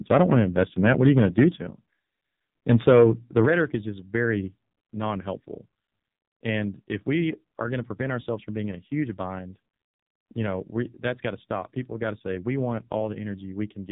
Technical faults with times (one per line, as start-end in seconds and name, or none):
0.00-13.92 AMR narrowband mobile codec
0.11-1.44 microphone overload
3.37-3.40 microphone overload